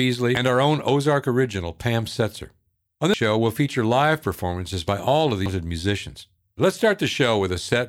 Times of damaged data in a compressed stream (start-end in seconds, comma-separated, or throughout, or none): 0.35, 3.14, 5.46